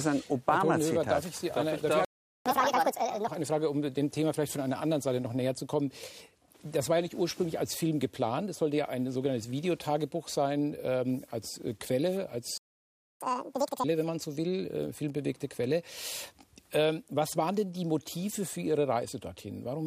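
A playback stall at 2.05 s cuts the sound to silence for 0.41 s, likely because the player ran out of buffered data or its thread was blocked. Catch-up at higher speed follows from 2.46 to 3.28 s: the player resamples its backlog at 1.5 times normal speed, raising pitch by around seven semitones until the lost time is recovered. A second playback stall at 12.58 s silences the audio for 0.63 s. Catch-up at higher speed then runs from 13.21 to 13.84 s at double speed, with pitch lifted by roughly ten semitones.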